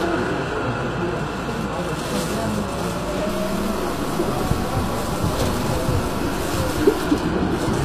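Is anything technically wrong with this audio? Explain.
Yes, there are two audible faults.

Throughout, the treble sounds synthetic and gritty, with nothing above about 14.9 kHz. This is likely HE-AAC compression at a low bitrate, around 24 kbps. The codec codes only the lower spectrum and rebuilds the top by copying lower bands upward, so the high-frequency detail is not the original and sounds metallic.

From 3.29 to 7.06 s, a grainy distortion follows the sound, and quiet passages break up and sputter. This likely comes from low bit depth without dither, about 5 bits with truncation. The rounding error tracks the signal instead of forming steady noise, and sits roughly 15 dB below it.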